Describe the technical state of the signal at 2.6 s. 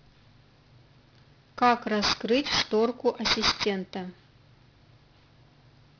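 At 2.6 s the speech carries aliasing, present across the whole clip: it was resampled from 16 kHz to 11 kHz without filtering, so content above 5.5 kHz folds back down as gritty, metallic sibilance only a few dB below the signal. A spectrogram shows energy running hard up to 5.5 kHz, with mirrored streaks.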